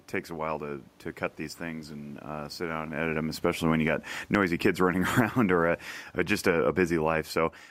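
Right after "these things and uh", at 2.64 s, the automatic gain falling kicks in. The AGC decides the input is too loud or its background noise too strong and pulls its gain down about 11 dB by 5.37 s, so the speech and the room noise sink together. There's also a level shift around 3 s from the talker moving. After "or a", from 5.94 s to 7.66 s, it eases down another 3 dB or so.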